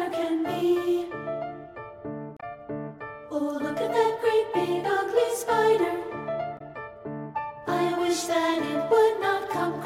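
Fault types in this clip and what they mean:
Damaged data in a compressed stream: at 2.37 to 2.44 s and 6.57 to 6.61 s, corrupted frames make the decoder lose sync, leaving brief glitches.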